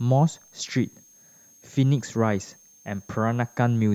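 A switching supply whistle runs under the speech from start to finish: a thin, high tone drifting between 6.35 and 6.47 kHz, roughly 30 dB below the speech. A switching power supply is cycling in an audible burst mode or beating with another one, and its whine wanders slightly as the load shifts.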